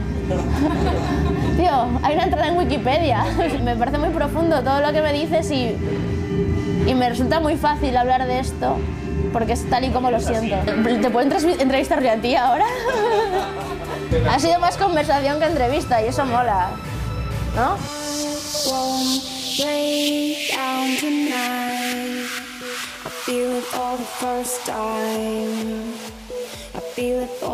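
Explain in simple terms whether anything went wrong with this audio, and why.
Nothing went wrong with this audio that a listener can pick out. There are no sudden breaks, jumps or unexpected changes to report anywhere in it.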